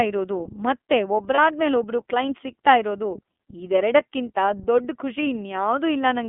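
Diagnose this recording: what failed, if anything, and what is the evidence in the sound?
The codec stage is at fault throughout: this speech has gone through the iLBC codec, and the damage is plainly audible as a rough, slightly synthetic texture. The sound is confined to a telephone band of about 250 Hz to 3.4 kHz, so a spectrogram shows a hard ceiling with nothing above 4 kHz and little below 250 Hz. Its coarse, frame-by-frame excitation coding fits iLBC's 30 ms mode, around 13 kbps.

At the network stage, lost iLBC frames cause a brief dropout from 1.34 to 1.39 s, right after "ಇರೋದು ಮತ್ತೆ". This is consistent with one missing 30 ms packet. The decoder covers the gap by repeating the last pitch cycle mixed with noise, so it sounds like a short held, faintly buzzy vowel. A waveform shows a stretch of near-identical repeated periods, and a spectrogram shows flat harmonics where the speech should move. 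Because each frame decodes independently, clean speech resumes immediately afterwards.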